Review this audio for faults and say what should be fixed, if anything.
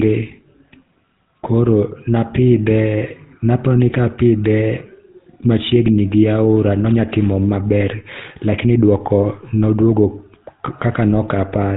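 A buzzy, gravelly roughness runs through the speech from start to finish, with nothing above 3.8 kHz. This is GSM full-rate codec damage, consistent with 13 kbps: a vocal-tract model driven by coarse, regularly spaced pulses replaces the real excitation. To prevent it, record or transmit over a wideband codec instead of a GSM full-rate link.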